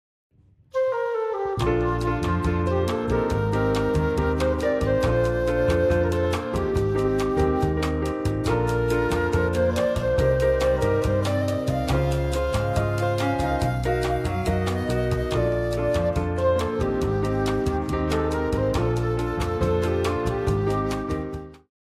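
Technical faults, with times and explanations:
Nothing here counts as a fault; the only notable thing is a smooth fade-out near the end, easing down from about 20.5 s to 21.71 s just as an editor would shape it.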